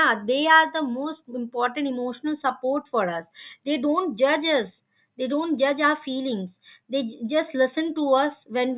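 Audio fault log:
No faults are audible in this speech clip.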